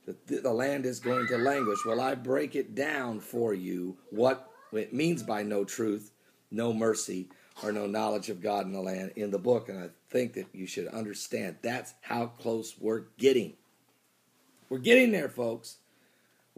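Nothing stood out as a technical fault on listening to this audio.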